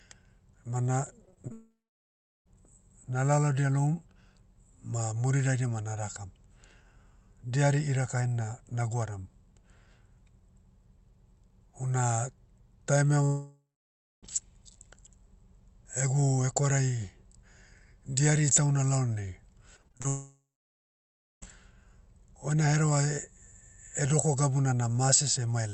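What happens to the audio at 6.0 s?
Nothing goes wrong at 6.0 s; the speech continues intact through that moment, carrying only the ordinary coding character of the call path it travelled over.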